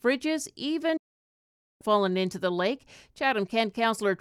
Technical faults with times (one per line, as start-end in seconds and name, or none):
0.97-1.81 digital broadcast dropout